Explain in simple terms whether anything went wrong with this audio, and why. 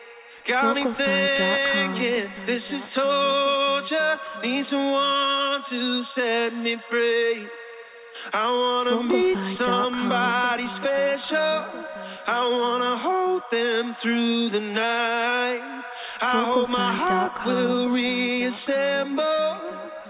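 Nothing went wrong: the sound came through an ordinary call connection whose telephone-style coding keeps everything below 4 kHz, which gives it the narrower tone you would expect from a phone line, and no fault of any kind can be heard in it.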